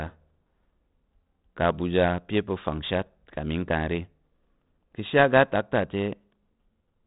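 From start to end the speech carries 4-bit ADPCM compression, and the damage is heavy. Each sample is coded as a coarse step from a prediction, so a gritty hiss rides on every loud syllable and sharp onsets distort. Nothing reaches above 3.8 kHz, which dulls the sound and fits roughly 32 kbps coding at a low sample rate.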